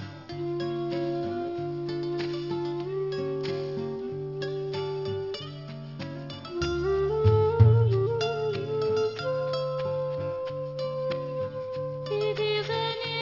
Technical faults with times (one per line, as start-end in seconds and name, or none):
0.00-13.22 aliasing